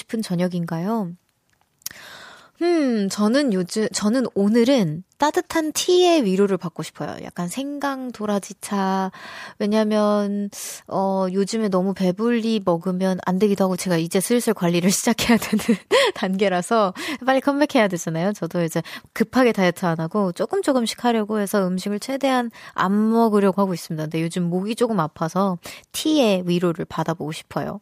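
Speech with no audible faults.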